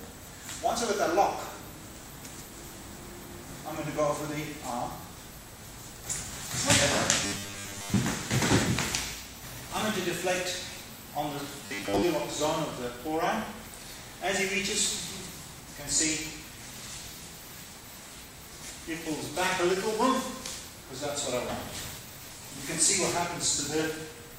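A rigid, metallic buzz at 100 Hz is heard from 7.26 to 7.97 s and again from 11.66 to 12.03 s. This is robotic sound from repeated short buffers, likely caused by starved playback looping a 10 ms block while most real audio is skipped.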